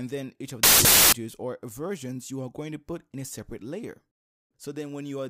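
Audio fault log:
0.63–1.13 s, samples built from the wrong bytes: a burst of loud, harsh broadband noise. The reader misassembles each sample's bytes, so rapidly changing low bits become the dominant part of every value for this half-second.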